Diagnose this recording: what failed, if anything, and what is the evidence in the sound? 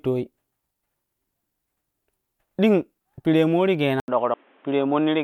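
At 4.0 s the speech goes dull and boxy after a gap of about 80 ms, and it stays that way to the end. Nothing remains above 3.8 kHz, and a new noise floor appears roughly 35 dB below the voice while the level barely moves. The likely cause is the input switching to a poorer device, a fault at the capture stage. A codec bandwidth drop would not bring a fresh noise floor or a silent gap.

At 4.34 s the speech jumps forward by roughly 300 ms. That matches compressed frames skipped at the codec or storage stage. The 32 ms frames suggest about seven frames went missing or were rejected as damaged. A buffer dropout would leave a hard click or a gap of silence. Here the lost audio is simply absent.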